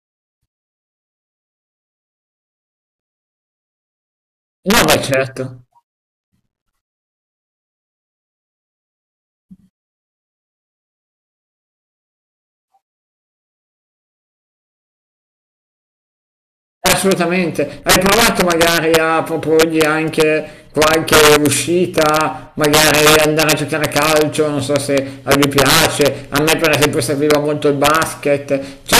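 Integer overflow runs throughout this speech clip. The signal is driven about 13 dB past the integer limit. Nothing caps it there. Instead, each peak that crosses the top wraps straight to the opposite extreme. Well under one percent of samples go over. That is enough to be heard. Loud syllables set off sudden, violent cracks. They are far sharper and harsher than ordinary clipping, and quieter passages stay clean.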